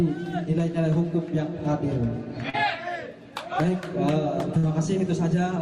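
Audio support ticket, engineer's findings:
Short concealed packet loss, 2.49–2.55 s: about 40 ms of packets never reached the decoder in time. The receiver extrapolated the preceding sound across the gap, leaving a brief smear or wobble.

Burst of packet loss, 4.57–4.65 s: about 60 ms of consecutive audio was lost. Concealment held the last sound and faded it down, then playback resumed past the missing segment.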